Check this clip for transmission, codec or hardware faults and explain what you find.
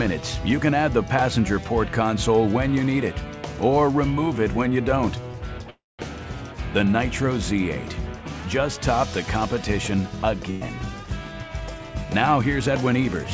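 Three transmission faults are audible, all typical of a packet-based call path. Nothing is present above 8 kHz, consistent with a wideband codec such as G.722.

From 5.70 to 6.01 s there is a call audio freeze. The last sound is held as a fading tail, then about 0.2 s of near-silence, before the audio picks up exactly where it stopped. The likely cause is delayed packets draining the jitter buffer. This inserts roughly 0.29 s of filler, with nothing lost.

At 10.51 to 10.63 s a burst of packet loss occurs. About 100 ms of consecutive audio never arrived in time. The receiver extends the preceding sound as a fading tail, then playback resumes further along, so that stretch of content is missing.

From 12.29 to 13.25 s a jitter buffer speed-up is audible. The receiver trims short pitch-period segments repeatedly to shed excess buffered delay, removing about a twentieth of a second in total. 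Playback runs at about 105% speed with unchanged pitch, giving a slightly rushed quality.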